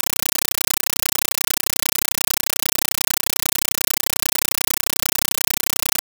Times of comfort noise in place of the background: none

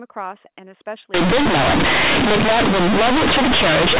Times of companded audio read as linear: 1.14-3.99

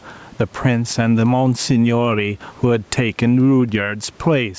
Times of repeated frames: none

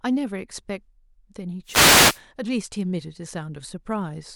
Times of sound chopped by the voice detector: none

